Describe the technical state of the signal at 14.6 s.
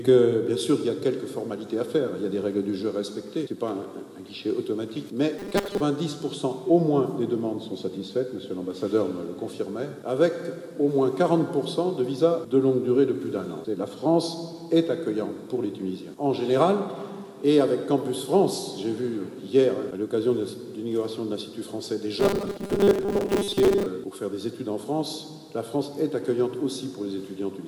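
The signal at 14.6 s is intact, with no audible fault at that moment.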